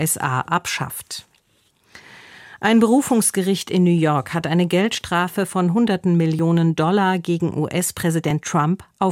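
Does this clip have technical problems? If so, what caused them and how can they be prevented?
Yes. Small forward jumps in the sound occur at 4.98, 6.39 and 8.31 s, each skipping a short stretch of roughly 15 ms. This is likely a dropped buffer (overrun): audio went uncollected before being overwritten. Larger buffers or higher capture-thread priority prevent it.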